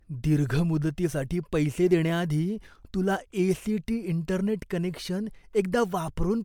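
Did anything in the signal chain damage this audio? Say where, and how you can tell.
Yes. Throughout the speech, consonant attacks are blurred and the tone has a swirly, hollow smear beyond what the bandwidth, reaching about 20 kHz, suggests. At the codec stage, this is likely generation loss: several MP3 re-encodes, fitting around 128 kbit/s, each requantising on a shifted frame grid.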